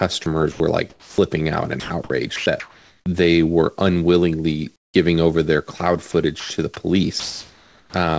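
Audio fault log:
0.24–1.18 s, 1.80–3.06 s, 5.78–6.50 s: sound chopped by the voice detector. The speech breaks up repeatedly. About 380 ms, 720 ms and 140 ms of it are swapped for flat synthetic hiss. The likely cause is a voice detector toggling transmission on and off, so real background and filler alternate.
4.76–4.94 s, 7.20–7.94 s: comfort noise in place of the background. The natural background gives way to steady, featureless noise. In the first gap it drops about 19 dB, to about 43 dB below the loud parts. In the second it stays level, about 32 dB down. This is likely the receiver filling untransmitted pauses.
4.92 s: onset clipped by the voice detector. About 20 ms of the start is missing, so the sound begins abruptly, with no soft attack. The detector was likely slow to notice sound returning, and filler noise stood in until sending resumed.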